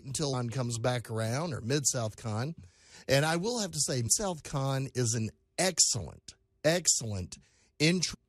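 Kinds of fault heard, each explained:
Damaged data in a compressed stream: a stretch of the encoded speech stream reached the decoder corrupted, so it misread or rejected the affected frames, lost its place and had to hunt for the next valid frame header before decoding properly again. In this clip that breakdown lasts only about 20 ms, from 8.13 to 8.15 s near the very close, and comes through as a brief chirp, squawk, click or short hole.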